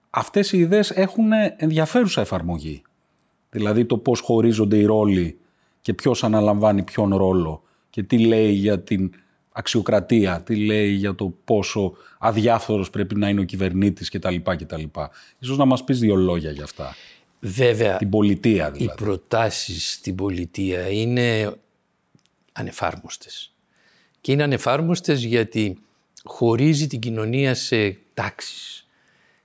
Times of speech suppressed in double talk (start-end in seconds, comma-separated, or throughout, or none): none